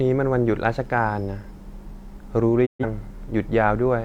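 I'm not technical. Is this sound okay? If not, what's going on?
No. At about 2.65 seconds the speech suddenly drops out, fading to silence very quickly, and comes back at about 2.85 seconds. This is a digital broadcast dropout. The receiver briefly lost the digital signal, or a few chunks of data arrived damaged, so it muted the sound until good data returned. The speech that was sent during that gap, roughly an eighth of a second, is simply missing.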